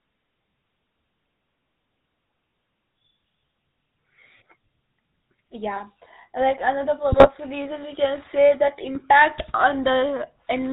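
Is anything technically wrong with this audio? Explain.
Yes, there are two faults.

GSM full-rate codec throughout: regular-pulse excitation through a vocal-tract model, consistent with 13 kbps full-rate, cuts everything above 4 kHz and leaves plainly audible buzzy, gravelly roughness.

GSM bit errors at 7.12–7.30 s, between "like another" and "reason we can say", and at 8.95–9.04 s: corrupted filter, pitch and gain values distort several frames, producing squawks, pops and gargling.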